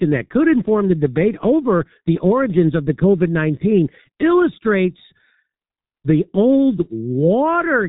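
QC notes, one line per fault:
Throughout, G.723.1 codec. The speech is muffled and hoarse, and consonants are blurred. Nothing is heard above 3.8 kHz, so sibilants and crisp edges are gone. The coarse, grainy texture points to a very low bitrate, around 6 kbit/s. The codec rebuilds speech from a simple vocal model refreshed only every 30 ms frame. Fast changes between sounds are smeared, and the damage is heavy across the whole clip.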